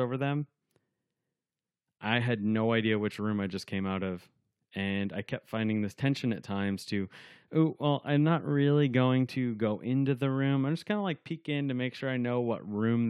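No technical faults can be heard anywhere in the speech recording.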